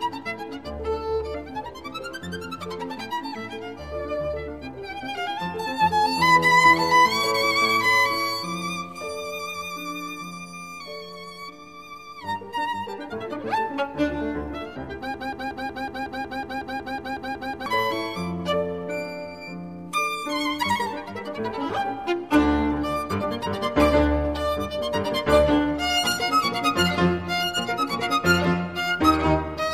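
A broken-record loop runs from 15.14 s to 17.66 s: a fragment of about 0.18 s repeats exactly, back to back, 14 times, giving a stuttering, mechanical chatter for roughly two and a half seconds. The likely cause is a stall in the player, encoder or stream, which kept re-sending the last short piece it still held instead of new audio. Whatever should have played during those seconds is missing.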